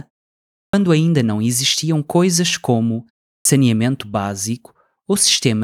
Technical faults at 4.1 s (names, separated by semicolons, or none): none